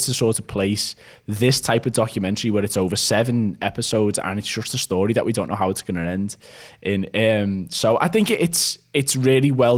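No technical faults can be heard anywhere in the speech. The Opus voice compression keeps the full band, with a light coding texture that fits a hybrid stream around 24 kbps, where the upper frequencies above 8 kHz are carried by a separate layer on top of the speech coder.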